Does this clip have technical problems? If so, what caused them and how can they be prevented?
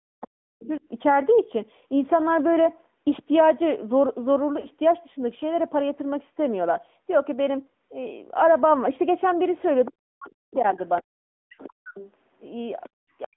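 Yes, there are several. The whole thing is squeezed through the AMR narrowband mobile codec. Everything sits in roughly a 200 Hz to 3.4 kHz telephone band, and the voice has that plainly audible buzzy, synthetic edge that fits the 10.2 kbps mode. To prevent it, use a wideband codec or a higher AMR rate end to end.

At 0.0 to 0.81 s, 9.9 to 11.97 s and again from 13.25 s to the end, the speech gets pushed down hard, by something like 40 dB at worst, in choppy pieces. That's speech suppressed in double talk, likely because the echo canceller couldn't tell the talker from the far end and ducked both. To prevent it, use a canceller with proper double-talk detection, or a headset so there's less echo to fight.

A second, fainter voice comes through from 0.25 to 0.75 s and from 9.58 to 12.89 s, roughly 20 dB under the talker. That's the other side's voice leaking through, likely loudspeaker echo the canceller didn't fully remove. 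To prevent it, use a headset or turn the speaker down and give the canceller time to converge.

At 4.6 s and 11.54 s there are short dropouts, each about 40 ms long, where the sound smears and dips before coming back rough. These are lost AMR speech frames, which fits two frames lost to radio errors each time, with the decoder stretching the last good frame while the level falls. To prevent it, improve signal coverage or use stronger channel coding.

At 12.89 s the room sound drops out for about 70 ms, by about 40 dB, then returns. That's background gated by the echo canceller, clamping the mic while the loudspeaker played. To prevent it, use gentler suppression or comfort noise to fill the gap.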